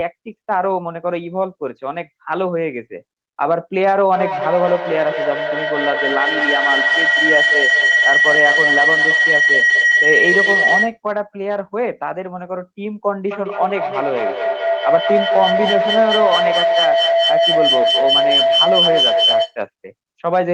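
Feedback howl from 4.13 to 10.98 s and again from 13.31 to 19.59 s: a microphone-loudspeaker loop gaining level each trip builds a tone, near 2 kHz then about 700 Hz, with the loop repeating roughly every fifth of a second and peaking about 4 dB and 3 dB above the speech.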